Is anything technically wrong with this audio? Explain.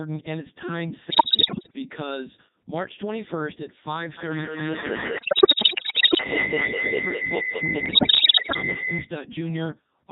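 Yes. Three faults are audible.

From start to finish the speech sounds robotic and buzzy, with little natural texture. This is the Codec 2 vocoder at its 3.2 kbit/s mode: the decoder rebuilds the speech from pitch, voicing, level and spectral-envelope data, so the original waveform is lost.

From 1.10 to 1.75 s, 5.18 to 6.24 s and 7.86 to 8.62 s, the speech breaks into warbles, bleeps and pitch and level jumps. These are bit errors on digital voice radio: corrupted bits, roughly one in ten to one in five, each distort a whole frame's pitch, level, voicing or spectrum.

From 4.18 to 9.16 s, a howl near 2 kHz builds through a loop that repeats about every 200 ms and rises to about 9 dB above the speech. This is feedback howl: a microphone-to-loudspeaker loop gains level on each pass and narrows to the frequency the loop favours.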